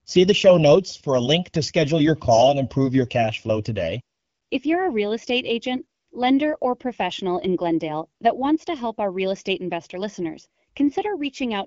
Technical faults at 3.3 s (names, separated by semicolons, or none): channel delay (comb filtering)